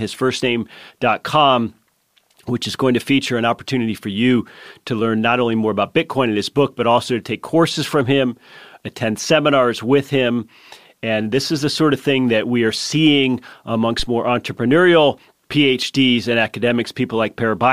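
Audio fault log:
13.99–14.08 s, phantom power thump: a deep, low-frequency thump lands between "that we are seeing" and "more entrepreneurial", peaking at about -14 dBFS and dying away within roughly 19 ms. It comes from supply power being switched on a live input. The sudden DC step passes through the coupling capacitors as one low-frequency pulse, so it is heard as a dull knock rather than a click.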